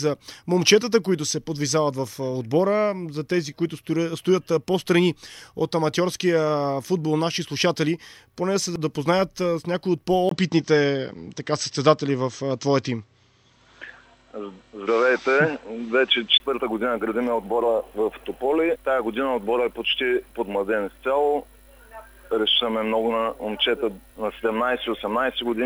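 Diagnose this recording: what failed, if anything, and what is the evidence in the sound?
From 10.29 to 16.4 s the sound turns dull and boxy: nothing above 8.1 kHz, a level shift of around 5 dB, a faint new noise floor, and a 20 ms gap at the switch. At the driver stage, the input likely switched to a poorer device.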